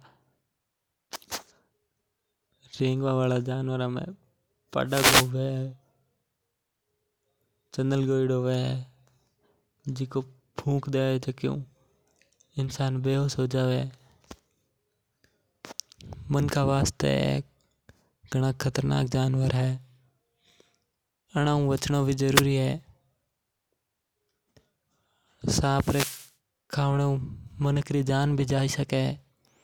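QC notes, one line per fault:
4.86–5.31 s, 22.33–22.43 s and 25.71–26.32 s: wireless microphone noise hit. Brief swishes of static rise over the speech as the FM radio signal fades under cancelling reflections and receiver noise surges. On a spectrogram they appear as broadband hiss bands; the waveform shows fuzzy noise bursts.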